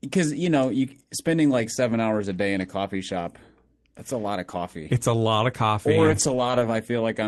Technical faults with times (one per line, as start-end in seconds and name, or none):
6.03-6.65 lost packet rebuilt from error correction